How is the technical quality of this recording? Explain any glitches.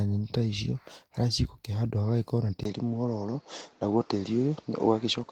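The recording has one clear fault: from 2.63 s to the end, the input likely switched to a poorer device. At 2.63 s there is a brief gap of about 20 ms, after which the speech loses its top end, with nothing above 7.6 kHz. The new input carries its own background noise, about 35 dB below the speech, so the sound turns duller while its loudness stays much the same. Before the switch, the fullband Opus stream reaches about 20.2 kHz.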